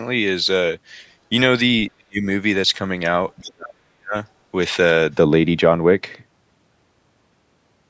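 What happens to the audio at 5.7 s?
A de-emphasis filter was applied wrongly from 5.13 s to the end at 7.89 s, cutting treble on audio that either had no pre-emphasis or had already been de-emphasized. Its response slopes to about 11 dB down at 10 kHz relative to 1 kHz, so at 5.7 s the speech sounds dull and muffled.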